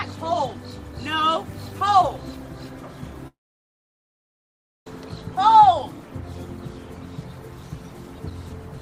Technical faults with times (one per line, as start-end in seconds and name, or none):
3.27-4.87 long network dropout